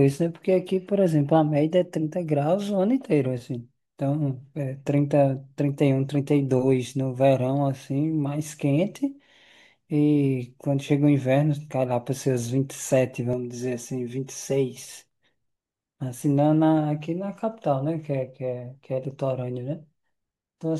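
From 13.33 to 14.88 s the speech turns hollow and phasey: channel delay comb filtering, with one channel lagging around 5 ms before the mono sum. On a spectrogram, evenly spaced dark horizontal notches appear, the first near 100 Hz, then roughly every 200 Hz.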